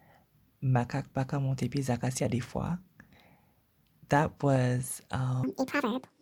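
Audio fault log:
5.44–6.21 s, section at the wrong speed: this closing stretch was likely played back against the wrong clock, running at twice its recorded rate, so the speech rushes through at double tempo and jumps about ten semitones higher, with pitch and pace shifting together.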